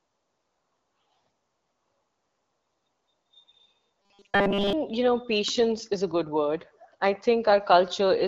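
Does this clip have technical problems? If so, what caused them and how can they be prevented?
Yes. Robotic sound from repeated short buffers runs from 4.02 to 4.73 s. A tiny stretch is replayed over and over, which fits a 5 ms buffer, giving a rigid 200 Hz metallic buzz while most of the real speech is skipped, likely because new audio arrived too late. A larger jitter buffer or steadier network delivery would prevent it.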